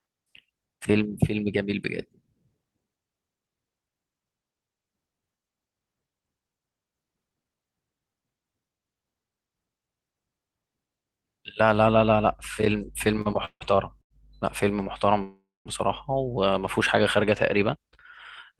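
Speech with a cluster of delivery faults between 13 and 16 s. Two short stalls from a late packet, at 13.21 to 13.27 s and 14.02 to 14.12 s, each hold the preceding sound for about 38 ms and 87 ms while an empty jitter buffer waits. Playback then resumes where it left off, so nothing is lost but the timing slips. Two call audio freezes, at 13.45 to 13.76 s and 15.23 to 15.67 s, sound like a held buzz fading out, with about 70 ms and 210 ms of silence. The longer one pushes the audio about 422 ms late, likely from packets held up in transit.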